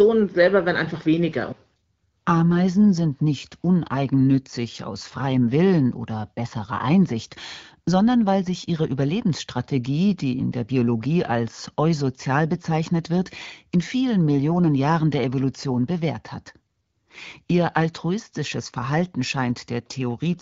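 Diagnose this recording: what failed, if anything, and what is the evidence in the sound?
Nothing failed; no stage of this chain shows faults.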